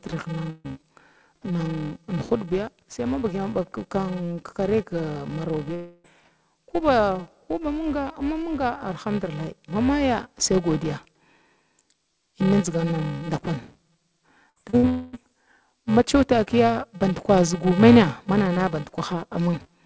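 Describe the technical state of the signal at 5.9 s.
At 5.9 s the audio sits inside a gap from 5.74 to 6.06 s, likely a long network dropout. A fading buzz or hiss fills the lost stretch, then briefly goes silent. Underneath, a filter restarted on every block adds a 345 Hz buzz, which fits a 128-sample block. Each block starts with a small tick that tracks the signal level.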